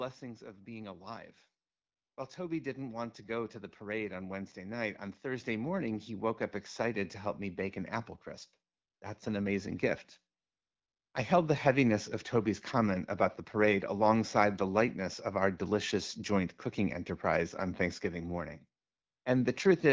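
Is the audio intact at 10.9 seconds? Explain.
No. From 10.39 to 11.13 s, after "an amazing gift" and before "I held the heaviness", AMR comfort noise takes over: the phone stopped sending speech frames for 740 ms and the receiver synthesised a steady, smooth noise in place of the real background, which switches in and out.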